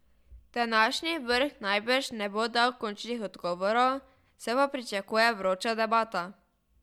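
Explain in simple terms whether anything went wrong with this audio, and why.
Nothing went wrong; this speech recording has no faults.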